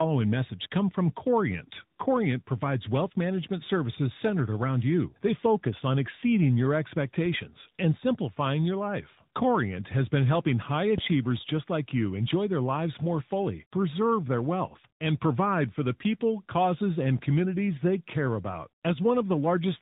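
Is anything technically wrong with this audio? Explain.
Yes, two faults.

Tandem speech coding runs throughout: the speech passes through at least two speech coders in series, the last probably AMR-NB. Each re-encodes the previous coder's damage, so the speech is rough, warbly and muffled, with nothing above 3.8 kHz. A single coder would sound cleaner.

A phantom power thump occurs from 10.98 to 11.08 s, between "has been helping high" and "just like you enjoy". A supply switching on or off on the live input sends a step through the coupling capacitors, heard as a deep thud decaying in about 23 ms. Unlike a plosive, it is independent of the speech.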